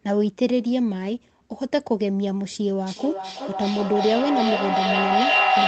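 From 2.86 s to the end, a feedback echo between two devices sets in. A second device replays the far-end sound into a nearby microphone, so each word returns about every 0.4 s, thinner and ringing, building to about 5 dB above the speech instead of decaying.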